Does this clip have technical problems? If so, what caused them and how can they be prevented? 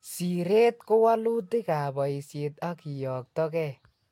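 No, this clip has no technical problems, so there is nothing to prevent.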